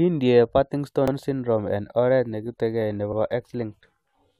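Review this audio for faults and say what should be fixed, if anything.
The speech has an overlapping chunks fault. The audio was handled in blocks of about 2.0 s, and one block began before the previous one had finished, so the boundary was written twice instead of butting cleanly. At 1.08 to 1.13 s, a 50 ms slice of the speech plays a second time immediately after itself, which is heard as a brief stutter at the join. To prevent it, align each chunk's start to the previous chunk's end sample so consecutive blocks neither overlap nor duplicate material.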